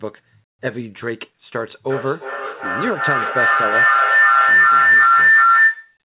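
A shrill tone near 2 kHz rises out of this speech from 1.89 s and keeps swelling to the end, pulsing about every 0.4 s and peaking about 10 dB above the speech. This is a feedback howl. Two devices in one room share the call, so each trip from loudspeaker to microphone adds level. The 2 kHz ring is the frequency the loop favours. The audio stops at 4 kHz, which fits a narrowband telephone codec.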